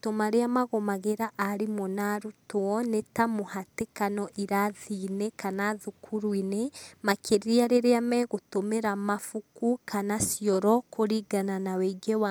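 A speech recording with nothing technically wrong with it.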